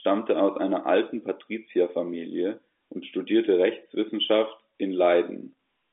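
Nothing technically wrong turns up in this bit of speech: it simply carries the familiar sound of G.711 telephone coding, with the line band running from 250 Hz to 3.5 kHz and nothing above 3.7 kHz, just as that phone path should.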